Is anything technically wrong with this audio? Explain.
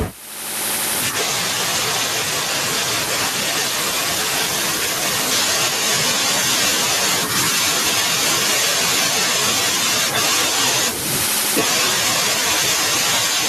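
Yes. Gain pumping runs through the whole clip. The likely cause is an input gain set far too high for the microphone, with a fast limiter or compressor clamping down on each loud syllable of speech and releasing in the pauses. The level swings by around 10 dB, and the room noise sits about 40 dB below the speech. The speech sounds flattened and squashed.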